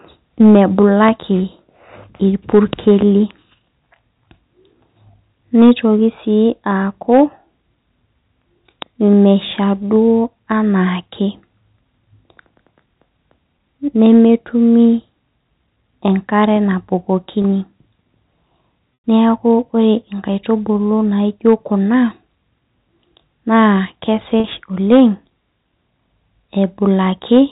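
Packet loss with pitch repetition breaks this telephone-band speech recording three times: about 20 ms lost at 17.42 to 17.44 s, 100 ms at 18.94 to 19.04 s, and 40 ms at 24.40 to 24.44 s. Each gap fits one to five lost 20 ms packets. The receiver filled each one by repeating the last pitch period while fading it out. The two shorter gaps sound like a briefly held, buzzy tone. The 100 ms gap fades toward silence before the speech cross-fades back in.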